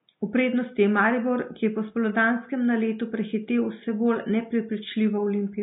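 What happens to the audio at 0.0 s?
Vorbis compression at a low bitrate, likely around 20 kbps, is already at work at 0.0 s and lasts the whole clip. The encoder trims the treble and quantises what is left so coarsely that fine speech detail turns into noise, giving plainly hissy, grainy speech with blurred onsets.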